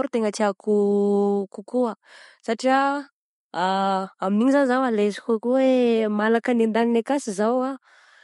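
From start to finish the speech carries plainly audible MP3 compression damage, likely from an encoder running short of bits, which fits a low bitrate around 48 kbps. Nothing remains above 11.2 kHz, so the top end sounds dull, and dropped detail gives the speech a watery, swirly edge.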